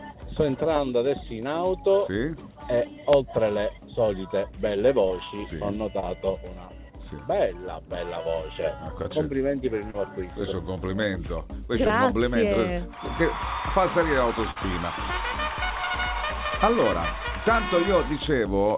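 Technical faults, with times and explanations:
5.08–5.12 s, 6.00–6.05 s, 9.03–9.06 s, 9.90–9.96 s, 10.74–10.78 s, 11.88–11.91 s: short concealed packet loss. About 20 ms of audio (40 ms at 9.90 s) failed to arrive. The receiver extended the preceding sound to fill the hole and then crossfaded back, which gives a brief smear or wobble.
14.51–14.58 s: burst of packet loss. A 40 ms stretch of audio is missing. The receiver covered it with about 47 ms of continued, decaying sound, heard as a held tail fading out before the audio resumes further on. The band above 4 kHz is absent here as elsewhere, which fits a narrowband G.711 call path.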